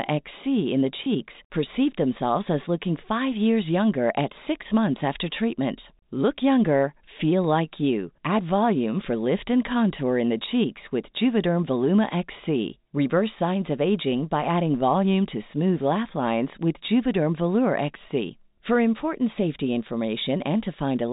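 Packet loss with pitch repetition hits this speech recording at 1.04 to 1.06 s, between "in the" and "perceived themselves as looking". Roughly 20 ms of signal went missing, which fits a single lost packet. The receiver filled the gap by repeating the last pitch period, so the sound briefly holds with a slight buzz before the talker resumes. The audio travels as G.711 telephone coding, which limits it to the band below 4 kHz.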